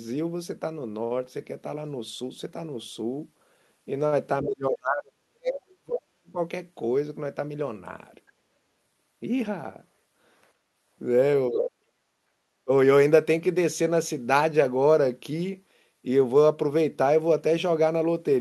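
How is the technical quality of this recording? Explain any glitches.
The talker drops out three times, heard through a call codec band-limited to about 12 kHz. From 4.43 to 6.39 s the speech sinks deeply, by roughly 40 dB at worst. It dips again from 11.49 to 11.89 s and briefly from 12.65 to 12.69 s. That pattern is speech suppressed in double talk, likely an echo canceller turning the talker down while the other side spoke.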